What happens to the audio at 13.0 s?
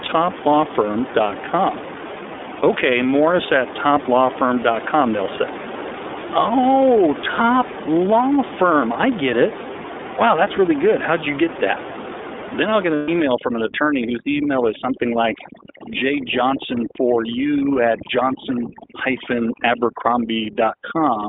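Right after "I'll get", from 12.95 to 13.09 s, the speech gives way to a held, slightly buzzy, breathy vowel-like sound before the voice snaps back to normal. These are lost iLBC frames: about 120 ms of packets went missing, which fits four 30 ms frames, and the decoder filled the gap by repeating the last pitch cycle mixed with noise. Because each iLBC frame is coded independently, recovery after the gap is almost immediate.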